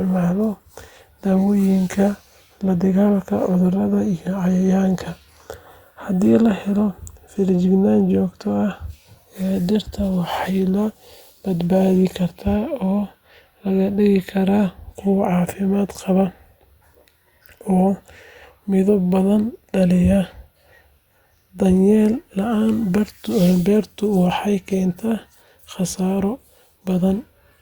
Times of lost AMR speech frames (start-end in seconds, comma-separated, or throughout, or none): none